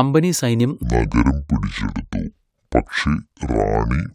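Speech, with a section at the wrong speed from 0.83 s to the end: playback drops to 0.588 times the original rate, so the voice turns deep and slow, roughly ten semitones lower, in one step. Because pitch and tempo fall together, it differs from a pitch-shift or time-stretch, which alter only one of them. The likely cause is that portion being fitted to the wrong clock during editing or playback.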